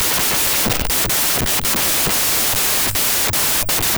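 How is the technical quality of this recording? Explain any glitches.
Pretty rough, honestly: the whole recording is a wrong sample width fault, start to finish. It sounds like the 16-bit integer data got read back as packed 24-bit samples. Each new sample grabs three bytes that straddle two original samples, so most values are garbage built from mismatched bytes and only some keep the top bits of the real waveform. You hear loud, harsh noise with the speech buried underneath, running about 1.5 times too fast, pitch raised to match.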